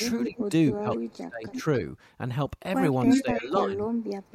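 At 0.23 to 0.43 s an echo leak brings back a copy of the speech about 0.3 s late, about 5 dB below it, likely from a loudspeaker's sound slipping past the far side's echo canceller. It recurs at 0.93 to 0.98 s, 1.48 to 1.62 s, 2.94 to 3.23 s (about 5 dB above the speech) and 3.44 to 3.64 s. On a spectrogram the same harmonic pattern repeats, shifted 0.3 s. Speech suppressed in double talk pulls the talker down about 15 dB at 0.28 to 0.39 s, then up to 25 dB across 0.73 to 1.65 s and 3.06 s to the end, likely the canceller turning down both its own talker and the echo during overlap. The waveform envelope pinches, and the spectrogram's upper bands vanish in patches.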